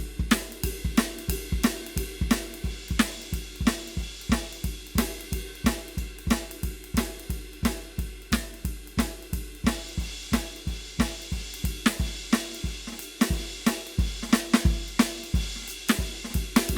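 Nothing here calls for comment: the music runs along without a single technical hiccup worth pointing to.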